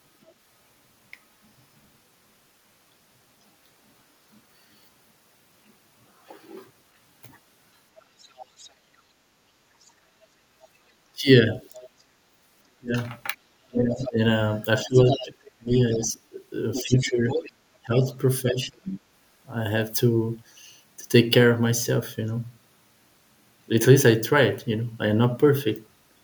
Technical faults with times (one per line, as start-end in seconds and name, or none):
0.24-0.33 other side's voice leaking through
8.00-11.88 other side's voice leaking through
9.33-9.44 background gated by the echo canceller
11.13-18.93 speech suppressed in double talk
12.04-12.24 background gated by the echo canceller
13.93-18.99 other side's voice leaking through